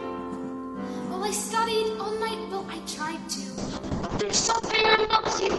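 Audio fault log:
3.58–5.59 s, call bitrate drop: the encoder falls back to a much lower bitrate for the final 2 seconds. The change in quality suggests a drop from around 96 kbps to roughly 6 kbps. Starved of bits, the codec quantizes coarsely, so the sound turns rough and watery. Audio bandwidth narrows from 20 kHz to 8 kHz, removing the top end and leaving a muffled tone. The bitrate stays at this minimum until the clip ends.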